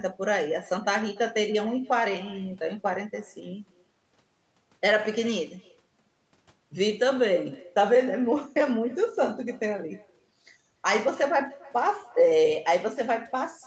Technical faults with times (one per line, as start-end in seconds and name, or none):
0.00-13.67 echo with no canceller